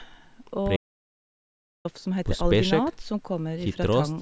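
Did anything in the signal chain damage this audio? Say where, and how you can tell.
Yes. The speech cuts off at 0.76 s and resumes at 1.85 s. This is an audio dropout to silence of about 1.09 s. The gap is silent, with no room tone. The input was likely lost at the device or link while writing continued.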